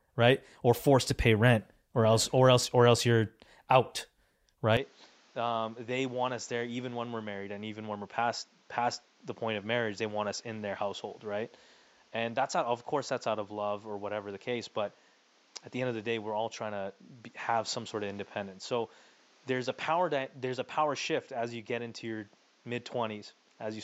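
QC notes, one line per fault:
4.77 to 23.84 s, input switched to a poorer device: with no gap, the speech turns duller, drops about 10 dB, loses everything above 7.6 kHz and gains its own faint background noise, about 30 dB below the speech, likely from a different microphone. A filter alone would not change level and noise together.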